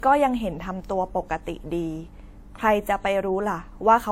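From start to finish, the speech has two layers of coding artefacts at once. Nothing is heard above 16.3 kHz. The mix of artefacts points to MP3 at around 64 kbit/s, likely followed by WMA at similar rates. This is transcoding between lossy codecs.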